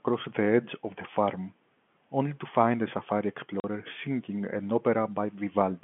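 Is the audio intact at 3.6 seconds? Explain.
No. From 3.60 to 3.64 s the speech drops out for 40 ms, a hole that fits two consecutive 20 ms packets lost in transit. This is packet loss filled with silence: the receiver had nothing to play for that span and inserted digital silence instead of concealing the gap, so the signal stops and restarts abruptly. The dropout has hard edges at both ends, standing out against the narrowband telephone sound of the G.711 line.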